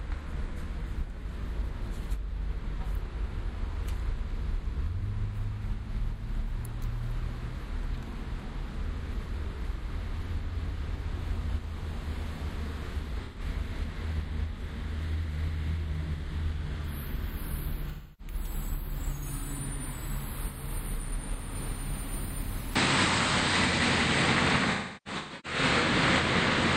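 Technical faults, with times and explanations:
13.24 to 13.40 s, 17.89 to 18.33 s, and 24.71 to 25.85 s, AAC frame loss with concealment: the decoder lost 128 ms, then about 300 ms, and finally about 725 ms of audio scattered across 1.1 s, with runs up to roughly 300 ms. It filled each gap from the last good spectrum. The result is a smeared, noisy, phasey patch, not a clean dropout or click. Unlike a device change, the sound recovers once each gap ends.
22.76 s to the end, input switched to a poorer device: the sound turns duller from this point, with nothing above 8.8 kHz, a level step of around 5 dB, and a faint new noise floor far below the signal. There is no silence at the change. The likely cause is a switch to a narrower-band input. Unlike frame loss, the change is a lasting shift in bandwidth and tone rather than brief smeared gaps.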